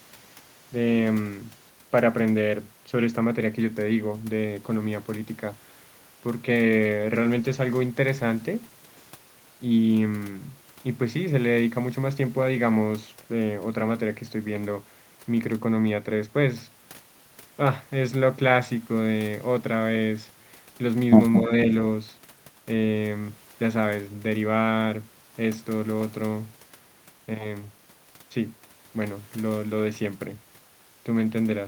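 Around 21.47 to 21.51 s the speech briefly dips, a short, shallow drop of a few decibels lasting only a few hundredths of a second. That's likely speech suppressed in double talk: the echo canceller, confused by overlapping talk, pulled the level down.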